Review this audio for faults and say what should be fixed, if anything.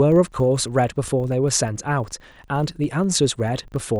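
A steady 25 Hz buzz of small ticks runs under the speech from start to finish, rising and falling with the speech level. This is a filter restarted on every block: it forgets its state and starts each block from silence, so every block boundary produces a transient. The 25 Hz repeat rate points to blocks of about 40 ms. To prevent it, carry the filter's internal state across blocks instead of resetting it.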